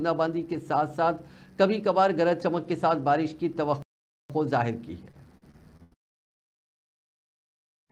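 At 3.82 s the player likely ran dry of buffered data or had its output thread held up, and nothing reached the output until it recovered at 4.30 s. This playback stall cuts the sound off in mid-flow for about 0.47 s of dead silence. When the audio returns, it resumes instead of easing back in, so the break sounds like an abrupt hole in an otherwise continuous stream.

From 5.11 s to 6.40 s, packets went missing or arrived too late over and over. The receiver bridged each gap by stretching the last sound it had. Eight such gaps fall within this 1.3 s stretch, the longest lasting 83 ms, and about a quarter of the span is patched material rather than real audio. This repeated packet loss gives the passage a choppy, robotic texture, with small fragments audibly missing between the patches.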